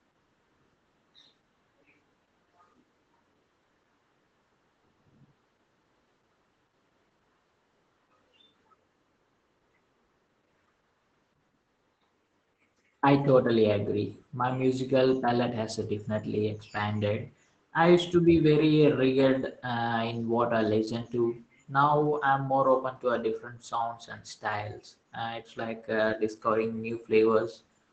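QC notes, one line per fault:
Throughout, Opus voice compression: the speech is plainly damaged in the way the linear-prediction SILK path behaves when starved, which fits a wideband setting at around 12 kbps with 20 ms frames. There's nothing above 15.8 kHz, but the bigger issue is the coarsely coded excitation: voices come out muffled, a bit hoarse and faintly robotic, because the codec keeps the rough vocal shape but can't spend bits on fine detail.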